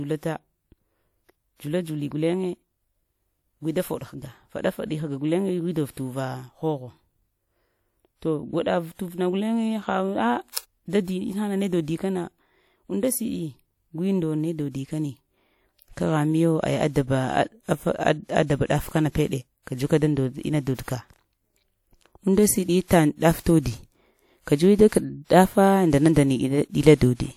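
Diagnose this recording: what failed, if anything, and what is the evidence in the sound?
Codec pre-echo at 20.75 s and 20.83 s: block-spread quantisation noise leaks 41 ms and 53 ms before sharp attacks, showing as broadband haze preceding each spectrogram onset.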